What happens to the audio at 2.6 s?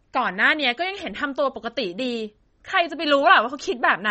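At 2.6 s, as throughout, the speech sounds watery and swirly with nothing above 8.3 kHz, likely MP3 compression at a bitrate near 32 kbps; a spectrogram shows a flat ceiling and flickering gaps.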